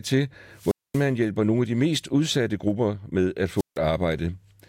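The wireless microphone's FM signal faded until the receiver's squelch cut the output, a wireless microphone squelch dropout. From 0.54 to 1.12 s, hiss swells into a muted gap of 0.23 s before "hjælper nogle af de"; after "udsatte grupper med at", 3.56 to 3.78 s repeats this with a 0.16 s gap.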